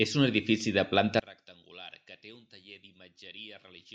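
From 1.20 s to the end, the speech falls by about 24 dB and turns faint in mono. This is one channel inverted. One stereo channel likely has reversed polarity, so the centred sound cancels when the two are summed.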